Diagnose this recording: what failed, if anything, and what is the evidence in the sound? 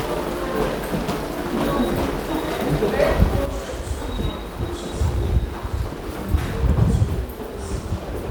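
What failed is one channel dropping out, and the likely culprit is the analogue wiring, something like a loose connector or cable on one side. At 3.46 s the level falls abruptly by about 6 dB and stays down through to the end. That step is what you get when the mono sum loses half its contribution: material shared by both channels halves in level, and anything that lived only in the missing channel is simply gone.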